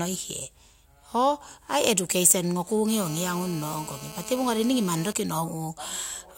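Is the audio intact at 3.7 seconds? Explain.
No. At 3.7 s the speech is overlaid by GSM phone buzz, which runs from 2.88 to 5.13 s. A nearby 2G phone on a call transmits in bursts about 217 times a second. The audio circuitry rectifies those radio pulses, producing a hard, raspy buzz about 15 dB below the speech that stays nearly steady. Unlike mains hum, which sits at 50 or 60 Hz and sounds smooth, this buzz is rooted at 217 Hz and carries a dense, harsh stack of harmonics.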